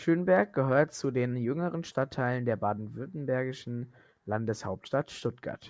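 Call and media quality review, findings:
Nothing stood out on listening to the speech in this clip.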